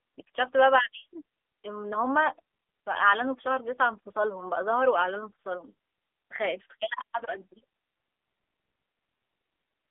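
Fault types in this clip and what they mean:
AMR narrowband mobile codec: low-rate AMR-NB coding, fitting roughly 8 kbps, rebuilds speech from a vocal-tract model, leaving it buzzy and synthetic with nothing above 3.7 kHz.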